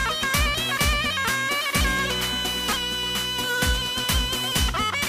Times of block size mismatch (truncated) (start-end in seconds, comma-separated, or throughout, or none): 3.63-5.09